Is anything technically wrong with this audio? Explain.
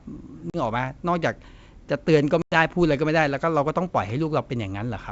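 Yes. Packet loss on an ADPCM call leaves two hard-edged silent holes, 0.50–0.57 s (40 ms lost) and 2.42–2.54 s (100 ms, about five packets), in this 64 kbit/s G.722 speech. Unlike a clean dropout, the decoder's predictor and step size drift from the sender's, so speech resumes with brief, slight distortion before settling.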